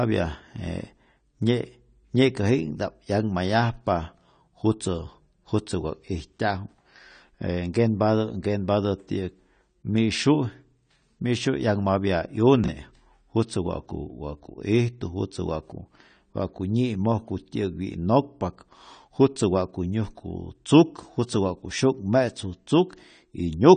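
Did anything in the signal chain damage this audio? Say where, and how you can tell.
Yes. Throughout the speech, the audio is dull, with nothing above about 9 kHz and a smeared, fizzy texture on sibilants and sustained sounds. This is likely AAC compression at the codec stage. The encoder has lowered its cut-off and quantised the remaining frequency lines coarsely, which leaves a thinned spectrum and a warbling edge. The damage is plainly audible and fits AAC-LC running at a low bitrate of around 32 kbps.

Chunks out of order occur at 12.64 to 12.68 s, a jumbled moment lasting about 40 ms. This points to the buffer or storage stage. One 20 ms chunk arrived or was written one chunk late, so two adjacent pieces swapped places. Nothing is missing, but the order is wrong for an instant, with three hard joins between mismatched waveforms.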